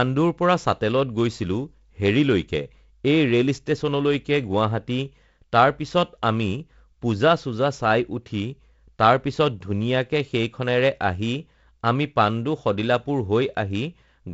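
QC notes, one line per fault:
No faults found.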